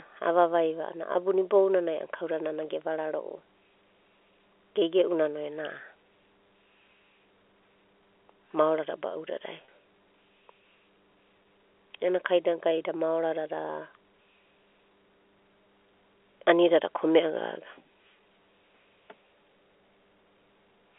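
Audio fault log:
throughout, mains hum: A steady low tone at 50 Hz, with a few low harmonics, sits under the speech for the whole clip, roughly 25 dB below the signal. A ground loop or nearby transformer is leaking the power line into the signal path. It differs from a codec or line-noise artefact because its pitch and level never move with the speech, and the telephone band's low-end cut around 300 Hz thins it without removing it.
1.13–1.15, 9.65–9.68, 11.43–11.45, 16.40, packet loss with pitch repetition: Four brief gaps were bridged by repeating the last pitch period: at 1.13 s after "avavai va a'ana", before "abuna ibounanai a'ana nana" (20 ms lost); at 9.65 s after "maorada ba'udadai" (30 ms); at 11.43 s before "ena kainagai da maoradada" (20 ms); at 16.40 s (10 ms). All are short, so each sounds like a slightly held, buzzy note with no drop to silence. A plain dropout would leave a click or hole, and these gaps fit losses of about 10 ms packets.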